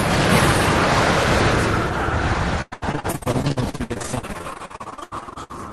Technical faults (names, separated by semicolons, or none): repeated packet loss (robotic sound)